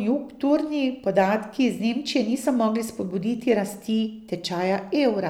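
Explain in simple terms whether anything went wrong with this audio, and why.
Nothing went wrong with this speech recording. Listening through it, there is no moment where the sound breaks, jumps or changes in a way that would point to a technical problem.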